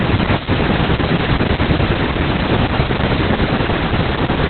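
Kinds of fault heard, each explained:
Opus voice compression: The speech passes through a linear-prediction voice coder at a very low rate. Nothing survives above 4.3 kHz, so it sounds muffled and narrowband. The excitation is coded coarsely, giving a hoarse, slightly robotic edge. This heavy damage fits a bitrate near 8 kbps.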